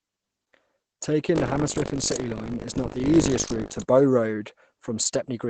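A speech recording that sounds muffled and hoarse throughout, with nothing above 8.7 kHz, most likely from heavy Opus compression in its SILK speech mode at a low bitrate near 12 kbps. From 1.34 to 3.82 s a robotic 50 Hz buzz rides on the sound. This is buffer tearing: about a tenth of each 20 ms period replays audio from roughly 70 ms earlier, with hard joins at both edges.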